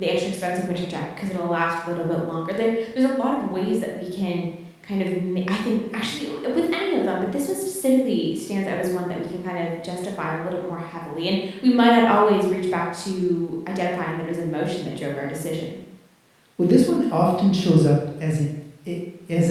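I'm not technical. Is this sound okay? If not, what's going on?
Yes, this one sounds fine, and there's nothing here that needs fixing.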